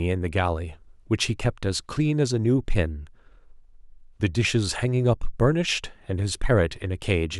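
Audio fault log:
No technical faults are audible in this speech clip; the signal holds steady throughout with no interruptions, level problems or added disturbances.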